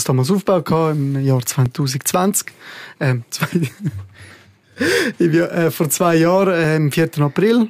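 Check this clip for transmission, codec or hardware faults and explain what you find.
One fault shows up: audio missing between chunks, with brief skips at 1.66 s and 4.15 s. About 2.5 s apart, the sound jumps ahead by a few milliseconds, likely because the recorder dropped a sliver while switching chunks. Unlike a dropout, no silence fills the gap.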